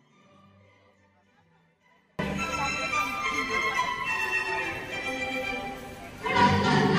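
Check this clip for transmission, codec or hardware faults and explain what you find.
One fault is present. From the start until 2.19 s there is an audio dropout to a faint residue. The signal was likely lost upstream while the path stayed live, leaving only a faint leak roughly 35 dB down. On the waveform this looks like a near-flat stretch, and on the spectrogram a dim band, both ending at an abrupt edge where full level returns.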